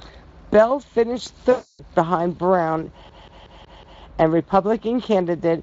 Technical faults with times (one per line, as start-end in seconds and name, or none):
1.51-1.82 VoIP packet loss concealed by the speech codec
3.09-4.02 CD stuck on one turn